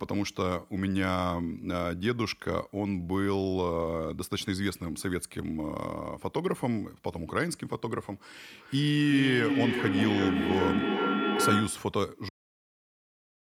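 A speech recording in which, from 8.52 to 12.0 s, each phrase returns about every 0.4 s, thinner and ringing, and builds up rather than fading, peaking about 1 dB above the speech itself. This is feedback echo between two devices: two devices on one call share a room, so one microphone re-captures what the other plays, beyond either echo canceller's reach. At 12.29 s the sound stops abruptly mid-sound into dead digital silence with no decay, a cut-off end where the final buffers were never written out.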